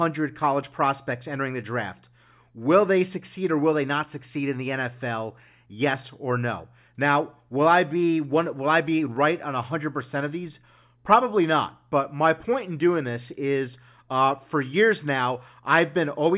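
No technical faults can be heard anywhere in the signal.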